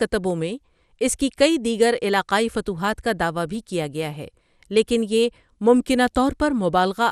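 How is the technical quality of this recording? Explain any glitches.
The recording has audible lossy-coding damage throughout the speech. MP2 compression, likely the cause, runs the whole length: the codec divides the sound into 32 sub-bands and, short of bits, shuts off the top ones, so nothing survives above 14.3 kHz. The remaining bands are coarsely quantised and flicker, giving a dull, gurgling, granular texture that fits a rate around 80 kbps.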